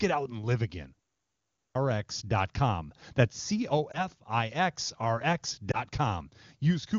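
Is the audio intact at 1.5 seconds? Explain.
No. At 1.5 seconds you're inside a clipped start after a pause, running from 1.19 to 1.75 s, right after "out and live again". During the brief 0.31 s gap the output device dozed off, and waking back up ate about 0.56 s, so the next phrase jumps in abruptly with its opening gone.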